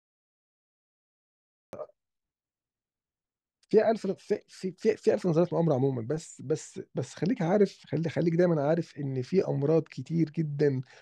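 From 0 to 1.73 s there is only digital silence. At 1.73 s the speech enters abruptly, mid-sound. This is a cut-off start: capture began late, after the talker had started. The sound has no natural attack or fade-in, so its opening is clipped away.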